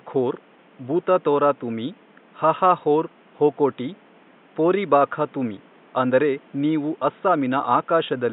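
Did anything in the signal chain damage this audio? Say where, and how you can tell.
No, nothing in the signal chain damaged this speech.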